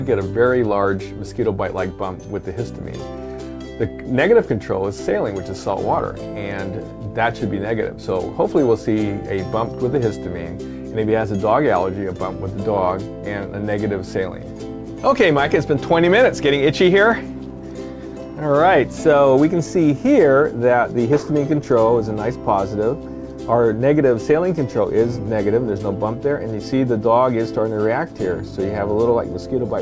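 No technical faults can be heard: the audio comes through a call path with its content confined below 8 kHz and nothing above that, which fits a wideband codec such as G.722 running at 64 kbps.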